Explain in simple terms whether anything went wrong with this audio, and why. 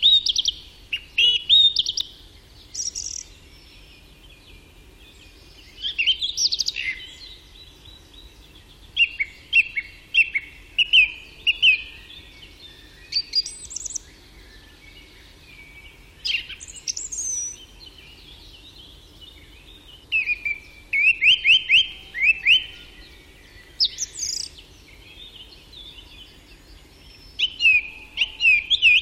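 Overlap between stream segments causes small clicks or skips at 2.01, 5.99 to 6.01, 7.98, 11.98, 13.97, 15.96 and 21.92 seconds. The audio arrives in 2-second pieces; where two pieces overlapped, the player trimmed away real sound, so the waveform jumps.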